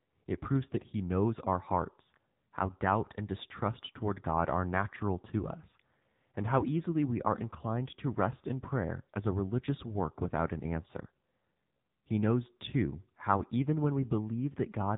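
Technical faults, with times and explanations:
Throughout, AMR narrowband mobile codec: the speech was squeezed through an 8 kHz telephone coder at a low rate, which fits the 7.4 kbps mode. Nothing above 4 kHz survives, and rebuilding the voice from sparse pulses makes it plainly buzzy and synthetic.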